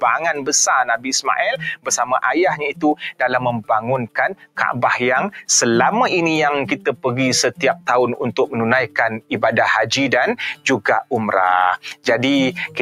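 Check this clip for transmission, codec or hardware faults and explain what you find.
A speech-tuned noise suppressor was left running on this audio. It causes two related faults.

The noise suppressor applied to music or sounds acts throughout. It treats steady material as noise, so levels swing by roughly 10 dB and the sound pumps, flutters or thins out.

Sound cut by the noise suppressor occurs at 0.35–0.5 s, 1.56–2.05 s, 2.72–3.24 s, 4.05–4.58 s and 7.53–7.88 s. Held sound sinks, by up to about 18 dB at 4.05 s.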